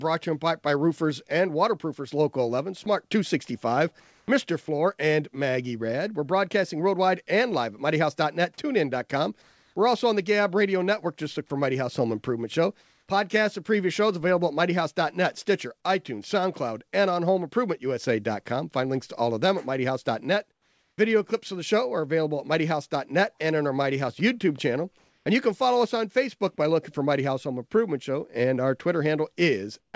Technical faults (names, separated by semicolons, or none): comfort noise in place of the background